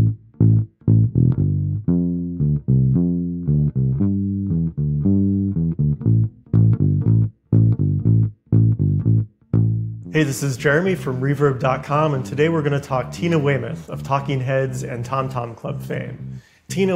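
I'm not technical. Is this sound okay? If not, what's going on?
Yes, this sound is okay. Nothing in it goes wrong at any point, so there is nothing here to fix.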